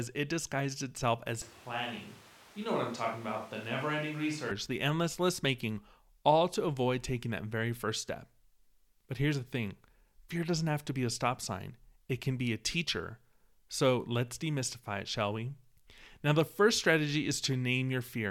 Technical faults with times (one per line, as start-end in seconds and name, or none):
1.42-4.51 switch to a distant microphone